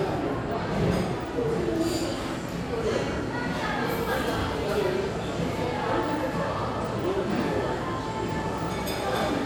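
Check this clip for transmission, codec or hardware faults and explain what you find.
Nothing in this recording of everyday sound points to a transmission, codec or hardware fault. The audio holds steady throughout, with no dropouts, glitches or damage of any kind to be heard.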